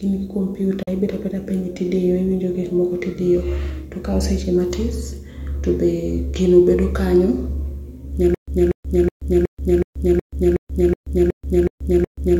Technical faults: Bluetooth dropout; stutter with silent gaps

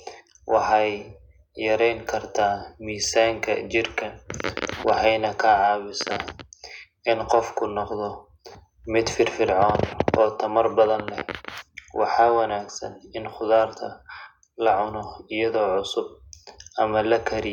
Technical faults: none

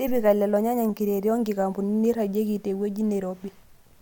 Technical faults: none

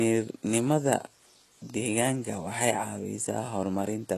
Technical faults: low-bitrate audio saved at a high bitrate

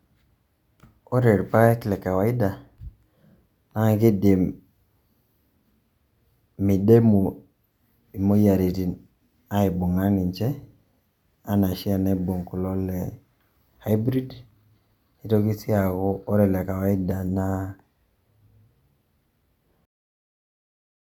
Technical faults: none

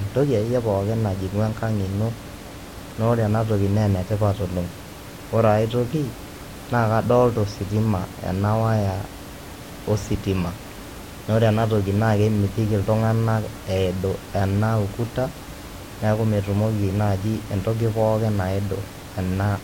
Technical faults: none

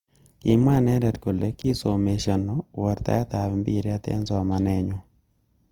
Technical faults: low-bitrate audio saved at a high bitrate

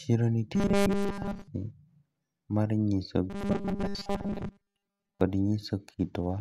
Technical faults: robotic sound from repeated short buffers

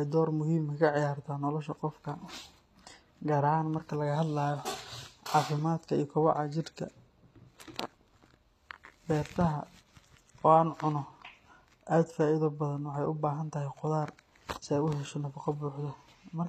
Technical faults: HE-AAC compression

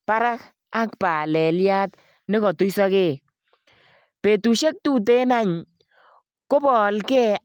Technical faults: none

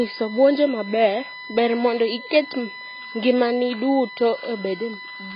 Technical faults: USB whine; AAC compression

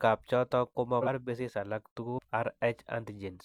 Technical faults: compressed frames skipped

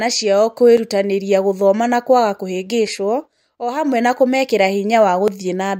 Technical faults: dropped samples

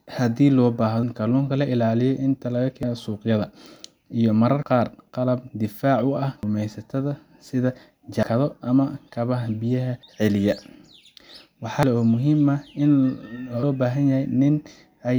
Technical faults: audio missing between chunks

